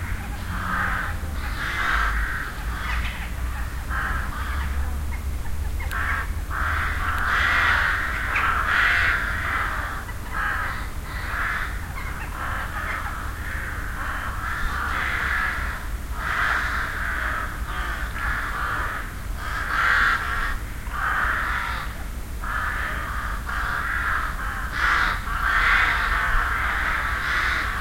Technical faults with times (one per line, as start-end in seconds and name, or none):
none